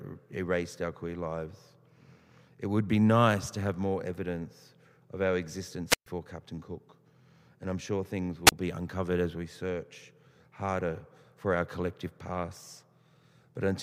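A speech clip with two wireless microphone squelch dropouts. The radio link fades, and the receiver mutes its output. After "more evidence of our" at 5.89 s, static rises into a 128 ms hole. After "I'm sure things" at 8.46 s, a 30 ms gap precedes "be uncovered as we".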